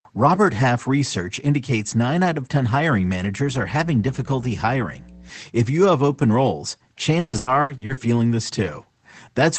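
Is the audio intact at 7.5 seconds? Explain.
No, 7.5 s falls inside a burst of repeated packet loss (robotic sound) from 7.19 to 7.99 s, right after "you have open roles". Six gaps, the longest 140 ms, are each patched by stretching the last sound, leaving choppy audio with pieces missing.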